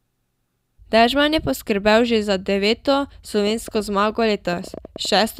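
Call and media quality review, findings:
Train of clicks, 3.47–5.18 s, starting just after "že za deveto". Roughly fifteen similar pops at an uneven pace, averaging 8.3 per second. Peaks about as loud as the speech. Audible over speech and gaps alike. Probable component: capture interface or nearby equipment. Likely cause: repeated impulse injection from interference or a struggling input device.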